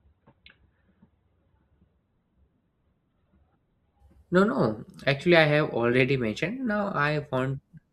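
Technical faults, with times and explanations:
0.0–4.0 s: adaptive stream starting at a low bitrate. Speech opens on a thin, coarse version with nothing above 4.5 kHz, consistent with roughly 12 kbit/s Opus, then jumps cleanly to fuller quality.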